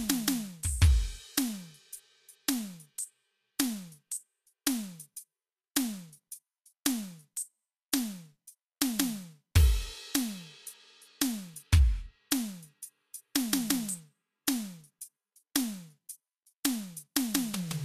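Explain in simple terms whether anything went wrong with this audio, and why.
Yes, something went wrong: across the whole music clip the treble is grainy and hissy, tones sound roughened, and nothing survives above about 14.2 kHz. That is likely Vorbis compression at low quality, which turns fine treble detail into noise rather than simply dulling it.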